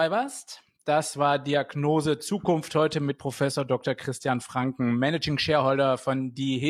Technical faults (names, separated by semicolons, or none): none